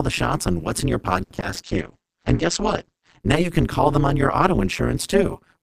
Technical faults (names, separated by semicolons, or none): overlap-add ripple